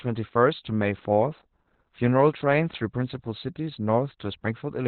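Throughout, the speech carries heavy Opus voice compression. The SILK coder has narrowed it to narrowband, with nothing above 4.3 kHz, and coarse excitation coding leaves it muffled, hoarse and slightly robotic, which fits roughly 8 kbps. A spectrogram shows a bare band above that ceiling.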